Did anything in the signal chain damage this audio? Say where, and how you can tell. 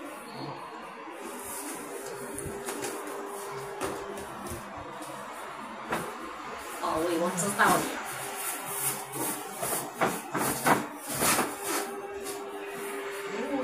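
Yes. Three isolated sharp clicks at 2.27, 7.03 and 10.98 s are consistent with dropped samples, likely from the driver or buffer stage losing a fraction of a millisecond of data each time. The waveform jumps abruptly from one value to a later one with nothing in between, and on a spectrogram each click shows as a thin vertical line across the full frequency range. The gaps are far too brief to remove any audible sound.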